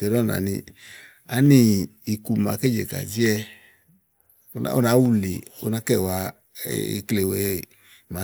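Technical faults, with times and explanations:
0.26 to 8.05 s, clock drift buffer slips: there's a click roughly every 0.6 s through the speech, about fifteen in all, evenly spaced no matter what's being said. That regular spacing likely comes from two devices running on separate clocks that disagree by a few hundred parts per million. The buffer between them slowly creeps until a handful of samples, around seven, gets dropped or doubled, and each jump leaves a discontinuity you hear as a tick.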